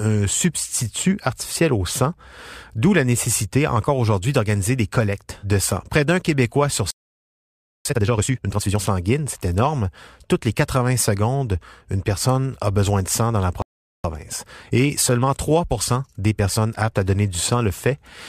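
At 6.91 s the speech just cuts out mid-flow and stays silent for about 0.95 s, a playback stall, most likely the player running dry on data or its thread getting blocked for a moment. When it comes back at 7.85 s, it kicks straight into time-compressed catch-up until 8.79 s. The player trims its backlog by snipping out small chunks and cross-fading over the gaps, so the speech runs at 2x pace but keeps its normal pitch.

It happens again at 13.62 s, a shorter stall of about 0.42 s of dead air, likely with the same underlying problem of the output starving until things recover. From 14.04 s to 17.04 s there's another catch-up stretch, this one much gentler at 1.1x. The speech sounds slightly hurried as the cut-and-crossfade process trims the backlog.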